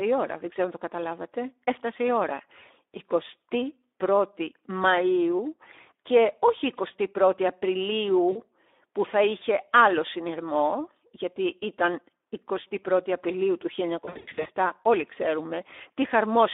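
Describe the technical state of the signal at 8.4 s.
At 8.4 s you're right inside a stretch of VoIP packet loss concealed by the speech codec, running from about 8.31 to 8.42 s, just before "που θα". Around 40 ms of audio went missing, which fits two lost frames. The decoder filled the hole by replaying its last pitch and filter settings at falling gain. You hear the sound smear and fade away, and because each frame builds on the previous one, it stays a bit weak and off for a moment after the stream resumes.

Underneath, the whole clip carries Speex codec damage that's plainly audible. The quality is consistent with a rate of roughly 11 kbps. The excitation is starved of bits, so the speech comes across noisy and hoarse. The band sits inside about 300 Hz to 3.6 kHz, so it has a thin telephone-line character.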